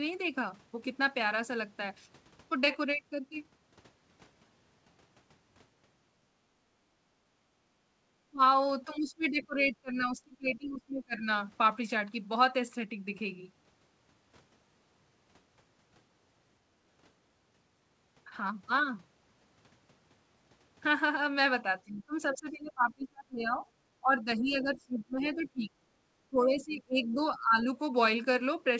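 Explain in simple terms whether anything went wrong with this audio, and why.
Three kinds of echo-canceller trouble can be heard in the speech.

Background gated by the echo canceller: from 6.36 to 8.02 s, and briefly from 16.65 to 16.78 s, the room sound behind the talker dips and then comes back. The echo canceller turned the microphone down while the loudspeaker was playing, so the quiet background was cut along with it. The first dip is the longer and deeper one, about a second of it in total. The second is a short flicker.

Speech suppressed in double talk: from 8.3 to 11.29 s, and again from 21.63 to 27.68 s, the talker's own voice is pulled down sharply in patches, about two seconds of it in the first stretch and about five in the second. The likely cause is both sides speaking at once. The canceller could not tell the talker apart from the loudspeaker's echo, so it turned down everything it heard.

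Other side's voice leaking through: during that second stretch, faint scraps of the far-end voice come through at 22.32 to 22.36 s, 24.75 to 25.41 s and 27.04 to 27.38 s. This is likely loudspeaker sound that the canceller failed to remove from the microphone. The first scrap is the most noticeable. The other two sit well below the talker.

The call path itself, a G.722 link, carries nothing above 8 kHz, which sets the top of the audio's frequency range.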